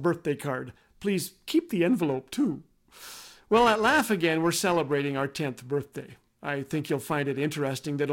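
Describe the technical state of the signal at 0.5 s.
At 0.5 s the speech signal is intact, with no audible technical fault at that point.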